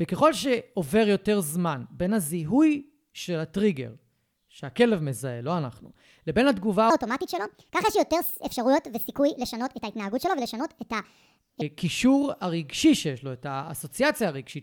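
From 6.90 s to 11.61 s, a section at the wrong speed plays back 1.48 times too fast. Pitch rises with it, about seven semitones, so the speech sounds high and hurried. The likely cause is playback at a mismatched clock rate.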